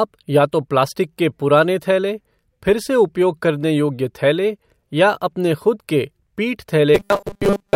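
Robotic sound from repeated short buffers runs from 6.95 s to the end at 7.75 s, just after "ख़ुद के पीठ". The speech collapses into a rigid, metallic buzz fixed at 200 Hz that only loosely tracks the words. The likely cause is fresh audio arriving too seldom, so the playback repeats a tiny slice, which fits a 5 ms buffer, over and over while most of the real speech, well over half, is skipped.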